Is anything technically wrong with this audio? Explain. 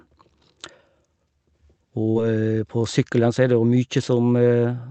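Yes. From 2.11 to 2.18 s, just before "på sykkelen", there is short concealed packet loss. About 40 ms of audio never arrived, and the receiver bridged the gap by extending the preceding sound, then blending back into the real signal. It is heard as a brief smear rather than the hard silence of a dropout. The call codec's band limit at about 8 kHz runs throughout the clip.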